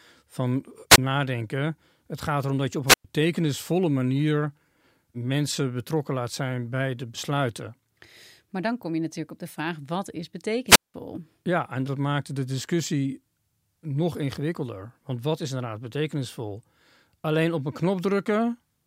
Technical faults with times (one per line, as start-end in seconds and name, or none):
0.90-0.98 wireless microphone squelch dropout
2.86-3.04 wireless microphone squelch dropout
10.67-10.94 wireless microphone squelch dropout